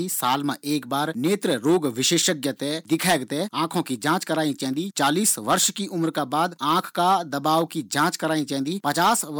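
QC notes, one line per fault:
Throughout, hard clipping: peaks driven about 9 dB past full scale are cut flat on a small fraction of samples, giving abrupt crackle on loud syllables rather than soft-saturation warmth.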